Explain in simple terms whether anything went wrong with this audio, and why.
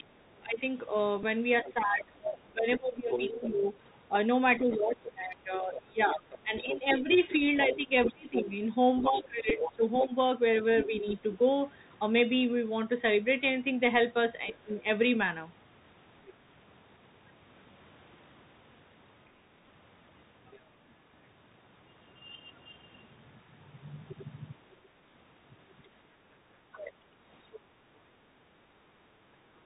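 Several things went wrong, and the most constant is the Bluetooth CVSD headset codec, present for the whole recording. This is the basic phone-call link between a wireless headset and a phone. It describes the sound one tiny step up or down at a time and carries nothing above 4 kHz, so the speech sounds narrow and muffled. Fast, bright sounds outrun those steps, which makes s sounds scratchy, and a grainy hiss lies underneath the talking.

In the first 11 seconds, from 0 to 11.06 s, there is speech suppressed in double talk. The talker's level keeps sinking, sometimes quite steeply, for around seven seconds in total. Two shorter dips follow, at 14.52 to 14.86 s and at 26.73 to 27.06 s. The likely cause is that both people were speaking at once. The echo-removal circuit could not tell the talker apart from the other person's voice coming out of the loudspeaker, so it turned both down.

Alongside that, from 1.66 to 11.12 s, the other side's voice is leaking through. 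A second voice can be heard under the talker, clearly quieter but still noticeable. This is likely sound from the loudspeaker that the echo canceller failed to remove from the microphone. Brief, very faint scraps of it come back at 20.54 to 20.59 s, at 24.1 to 24.24 s, and at 27.52 to 27.6 s.

A Bluetooth headset packet repeated three times, at 1.23 s, 9.5 s and 19.69 s. Each time a few small chunks of audio, about 7.5 to 11 ms in total, went missing between headset and phone. The chip replayed the last good chunk in their place, which leaves a short buzzy tick at each of those moments.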